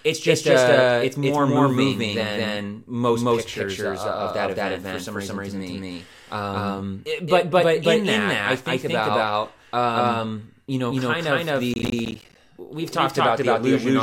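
Speech, with a doubled audio track running the whole way through: every syllable is followed by a second, equally loud, full-band copy roughly a fifth of a second later, with no decay or room colouring, so consonants clatter in pairs. The likely cause is the same signal being captured again through a slower path, or an edit holding two copies out of step. On a spectrogram, each burst of energy appears twice at a fixed spacing; on the waveform, onsets repeat at matching height. From 11.74 to 12.35 s, right after "you know kind of", processor overload crackle breaks in. Many tiny silent gaps punch through the sound, about twenty of them, which fits buffers of roughly 10 ms being missed one after another. The result is a gritty tearing that stops as soon as the stretch ends. The waveform shows repeated hard-edged dropouts to silence, and the spectrogram shows thin vertical broadband stripes across that span.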